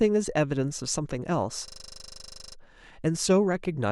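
From 1.68 to 2.56 s, a system hang loop: the machine froze while the hardware replayed one 40 ms buffer, producing a 25 Hz machine-gun stutter.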